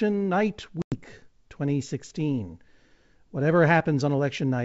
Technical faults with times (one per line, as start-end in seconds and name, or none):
0.82-0.99 packet loss on an ADPCM call